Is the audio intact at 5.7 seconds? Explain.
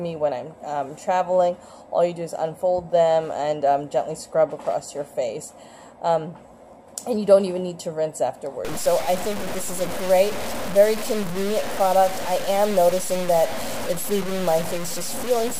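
Yes, at 5.7 seconds the audio plays through cleanly, with no dropout, click, distortion or other break in the signal.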